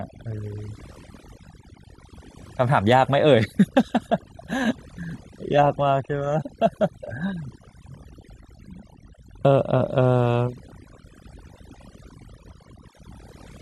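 In this speech, the background drops throughout and is flecked with twinkling specks. This is overdone noise removal: the reduction was set so strong that frequency bands near its noise estimate are cut, taking quiet parts of the voice with them. At 2.38 s, 6.41 to 6.43 s and 8.98 s the audio lurches forward past roughly 150 ms. These are compressed frames skipped, a run of several missing or rejected frames.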